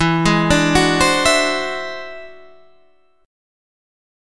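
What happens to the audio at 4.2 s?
Nothing goes wrong at 4.2 s; the audio runs on intact through that moment with no dropout, click or distortion.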